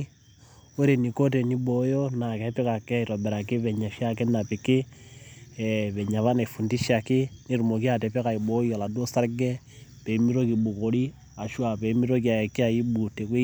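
No audible technical faults turn up anywhere in the clip, so there is nothing to log.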